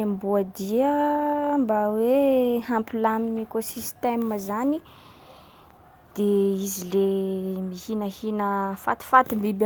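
No technical faults can be heard anywhere in this recording.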